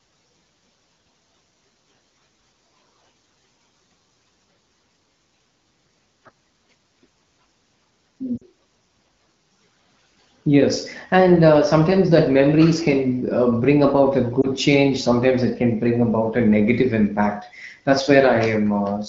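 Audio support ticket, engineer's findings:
Lost AMR speech frames: radio-side errors failed frame checksums; the AMR-WB decoder concealed them by repeating the last good pitch and vocal-tract settings at falling gain. Sound drops to near silence at 8.38–8.44 s (about two frames) and dips at 14.41–14.47 s (one frame), then recovers; the wideband band itself sounds lightly coded, consistent with 12.65 kbit/s.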